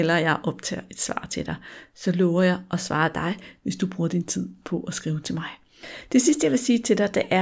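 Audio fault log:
No faults heard anywhere in the speech.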